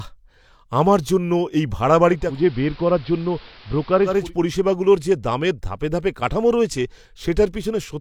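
After "আমার জন্য এই ভাড়া", from 2.07 s to 4.35 s, the speech dulls, drops about 2 dB and gains a faint hiss. This is digital radio blending to analogue: the receiver cross-fades over 0.4 s to the AM broadcast, returning before "পরিষেবাগুলোর যে দামের ধাপে".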